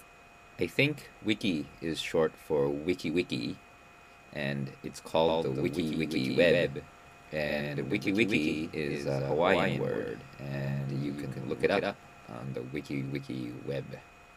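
From about 5.28 s to 12.44 s there's a doubled audio track. A second full-band copy of the sound trails the original by roughly 150 ms, sitting a few dB below it, around 5 dB down. It's clean, with no decay or room colour, and it cuts in and out abruptly at those edges. That points to a likely cause of the signal being picked up twice, once through a slower path, or an edit leaving two copies out of step.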